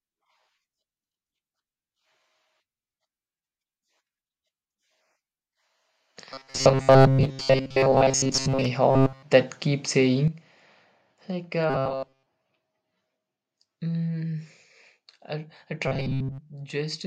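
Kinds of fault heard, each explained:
Robotic sound from repeated short buffers: The speech turns into a rigid metallic buzz at 134 Hz. The likely cause is repeated buffers of about 7.5 ms while real audio is skipped.
Sudden gain jump: At 10.28 s, speech and background drop together by about 10 dB in one step. This is likely an unramped digital gain change.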